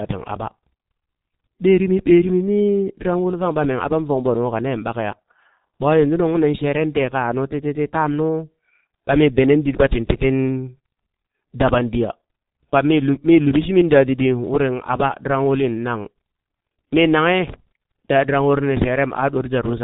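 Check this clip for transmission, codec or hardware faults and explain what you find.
One codec fault affects the whole speech clip. Throughout, the G.723.1 codec removes everything above 3.8 kHz and rebuilds speech from slowly updated 30 ms frames, which fits a rate near 6.3 kbit/s. The result is heavily muffled, hoarse sound with smeared consonants.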